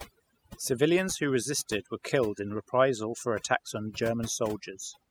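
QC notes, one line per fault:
Throughout: overdone noise removal. The background is dropped and broken up into twinkling specks. A noise reducer set too strong is cutting individual frequency bands that sit close to its noise estimate, taking quieter parts of the voice along with them.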